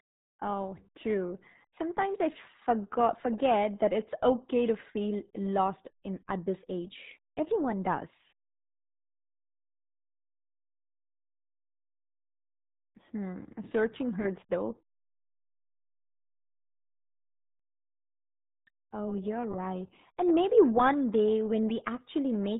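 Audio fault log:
throughout: RealAudio 14.4 codec. The speech is band-limited hard, with nothing reaching above about 3.8 kHz, so sibilants and consonant edges are lost and the voice sounds muffled and boxed-in. Heavy codec damage adds a gargly, watery texture as the coder coarsely models each short frame and discards its fine detail. The narrow band and degree of smearing fit a low-rate dial-up speech coder running at about 8 kbit/s.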